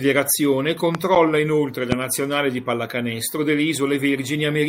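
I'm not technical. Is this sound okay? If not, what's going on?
No. There are two loud pops in this speech, one from 0.95 to 0.97 s and another from 1.92 to 1.94 s. Each is a single sharp click, much louder than the talking, and the speech carries on underneath. A loud pop like this is most likely a brief electrical jolt, such as a cable being bumped, a switch flicking or a static discharge, that got into the signal and came out of the speaker as a thump.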